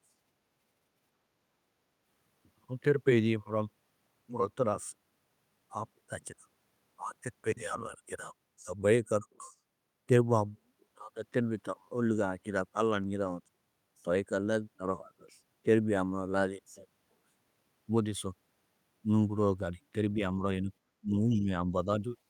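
Speech recording with no technical faults audible anywhere.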